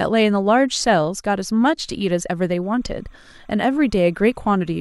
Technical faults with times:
2.63-4.81 timecode bleed

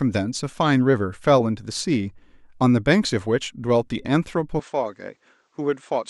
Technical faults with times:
4.60-6.09 input switched to a poorer device

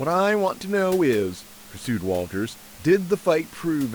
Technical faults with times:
none

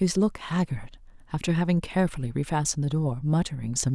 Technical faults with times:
none

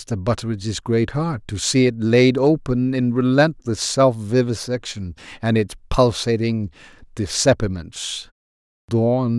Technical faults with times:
8.70-8.88 clipped start after a pause

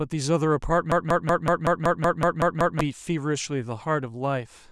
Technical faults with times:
0.92-2.81 broken-record loop

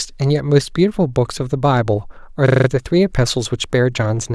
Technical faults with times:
2.48-2.68 system hang loop

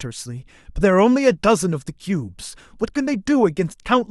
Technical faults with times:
none

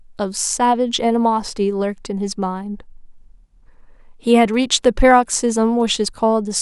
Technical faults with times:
4.39-6.05 GSM signalling bursts

